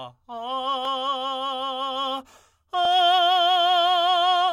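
No technical faults can be heard anywhere in this music.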